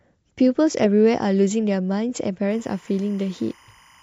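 From 2.51 s to the end, timecode bleed appears: 25-frame linear timecode leaking from a neighbouring line sits roughly 30 dB under the speech, chirping between pitches near 1 kHz and 2 kHz. That rapid two-pitch warble separates it from a single steady whine.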